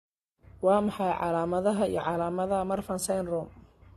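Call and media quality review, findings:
Speech band stops dead at 13 kHz across the whole clip, with smeary, swirly low-bitrate artefacts underneath. Likely low-bitrate audio saved at a high bitrate: a roughly 32 kbit/s AAC-style source re-encoded as generous MP3. The bigger file can't bring back the missing detail.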